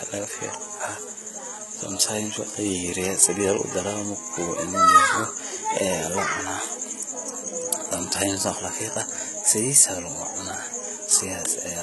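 Throughout, the speech has gritty, lispy sibilants and metallic treble, likely HE-AAC compression near 16 kbps; a spectrogram shows blocky, copied-looking upper bands above a crossover.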